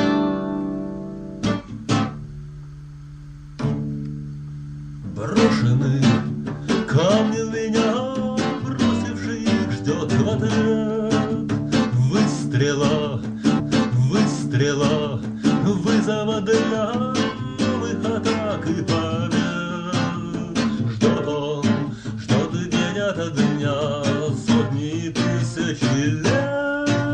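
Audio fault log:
13.59 to 15.58 s, stream segment repeated: at 15.58 s the audio jumps back and plays the previous two seconds again, from 13.59 s onward, so you get a stretch you've already heard, with a small blip right at the seam. The repeat adds about 2.0 s to the running time. That's the player fetching or queuing the same chunk twice, and a roughly two-second repeat fits a segment that length being handed over a second time.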